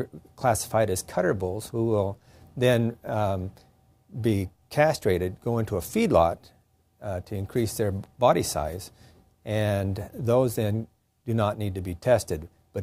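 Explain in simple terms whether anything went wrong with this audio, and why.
No faults can be heard.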